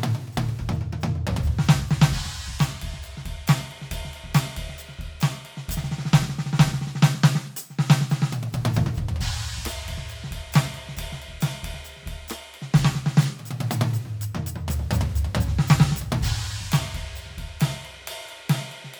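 No technical faults can be heard anywhere in this music recording; the signal holds steady and intact throughout.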